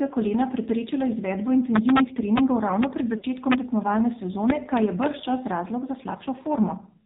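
Throughout, the speech carries the signature of the AMR narrowband mobile codec. Everything above 4 kHz is missing, leaving a thin, telephone-band sound. The damage is heavy. Voiced sounds turn buzzy and synthetic because the codec rebuilds them from a vocal-tract model excited by only a few pulses per subframe. The coarseness points to one of AMR-NB's low modes, which fits a rate around 5.9 kbps, where pitch and spectral detail are quantised very roughly.

From 3.18 to 3.25 s there are lost AMR speech frames. Radio errors caused frames to fail their checksum, so the decoder repeated the last good pitch and vocal-tract settings at reducing gain. The result is a short, smeared warble or dip in level, followed by a rough, weak onset as decoding resumes. The gap lasts about 40 ms, which fits two consecutive 20 ms frames being concealed.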